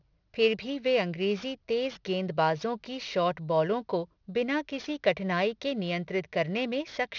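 Aliasing runs through the whole clip. The sample rate was cut without a filter first, which fits a drop from 44.1 kHz to 12 kHz. Everything above 6 kHz folds back below that point. It lands on pitches unrelated to the speech. The folded energy sits roughly 25 dB under the speech. Sibilants sound gritty and metallic. The spectrum stays full right up to 6 kHz, then stops dead.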